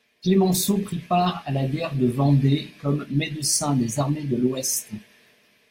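A short speech recording, and nothing technically wrong turns up anywhere in it.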